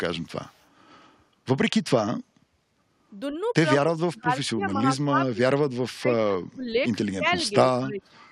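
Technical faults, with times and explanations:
0.48–0.67 s, echo leak: The far end's echo canceller likely let part of its loudspeaker pickup through and sent it back, so a very faint copy of the speech trails the original by about 181 ms, sitting far below the main voice as a brief ghostly repeat.
3.77–5.71 s, 5.92–6.86 s and 7.15–8.12 s, speech suppressed in double talk: With both sides talking, the echo canceller likely mistook the near talker for loudspeaker echo and turned everything down. The speech dips sharply, by roughly 35 dB at worst in the first stretch and about 25 dB in the later two, with roughly 1.5 s, 0.7 s and 0.7 s audibly affected.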